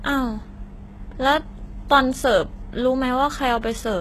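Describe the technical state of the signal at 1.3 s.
At 1.3 s the speech carries the same damage heard across the whole clip, which is likely HE-AAC compression at a very low rate, fitting roughly 16 kbps. The treble above the crossover is rebuilt from copied lower bands rather than coded, so s sounds come out gritty and metallic. On a spectrogram there is a hard ceiling near 12.3 kHz, and the upper band shows blurred, repeated patterns instead of clean harmonics.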